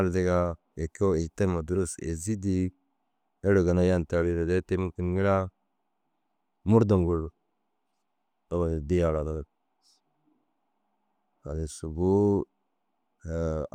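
No technical faults can be heard in this recording.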